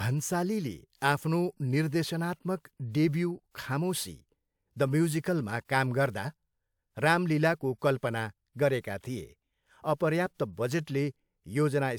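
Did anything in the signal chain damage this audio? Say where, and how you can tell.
No, nothing in the signal chain damaged this audio.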